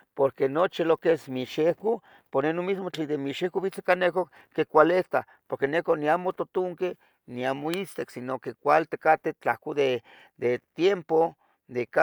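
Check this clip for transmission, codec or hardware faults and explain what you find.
Nothing in the speech points to a transmission, codec or hardware fault, so there is none to report.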